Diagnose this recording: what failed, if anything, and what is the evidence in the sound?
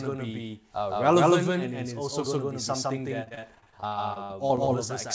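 Somewhere upstream a second path is feeding the mix, likely a slower duplicate capture or an edit holding two copies out of step. Throughout the speech, a full-band doubled audio track sits at roughly equal level about 150 ms behind, with no decay or room colour.

On the network leg of the call, packets were repeatedly lost or late from 3.24 to 4.69 s, right after "going to be something". Concealment stretched the last sound into each hole, giving choppy speech with pieces missing. The longest gap is 59 ms, and about a quarter of that stretch is patched. Above this sits the call codec's ordinary band limit, with nothing above 8 kHz.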